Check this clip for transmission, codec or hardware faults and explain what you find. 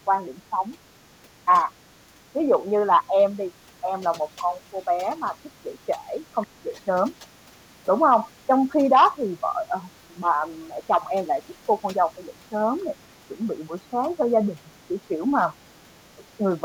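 One fault recurs throughout: speech suppressed in double talk, at 0.05–0.17, 0.5–0.77, 1.22–1.71, 2.08–12.85, 13.28–14.18, 14.55–15.44 and 16.18–16.64 s. The likely cause is an echo canceller that, with both ends talking, cannot separate the near voice from loudspeaker echo and turns both down. The speech dips by around 5 dB, and by nearer 10 dB at 1.22–1.71 s. Through the long middle stretch it is pulled down for most of the time.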